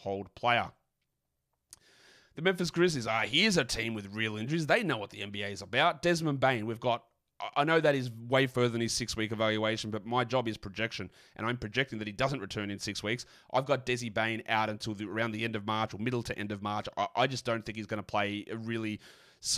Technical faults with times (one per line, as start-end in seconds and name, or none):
none